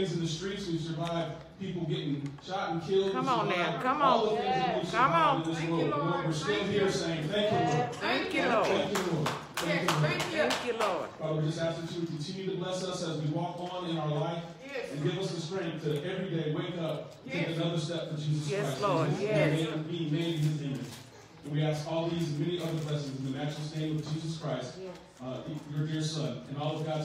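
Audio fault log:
No audible faults were found anywhere in this recording.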